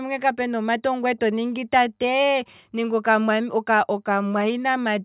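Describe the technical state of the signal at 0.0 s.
At 0.0 s the speech signal is intact, with no audible technical fault at that moment.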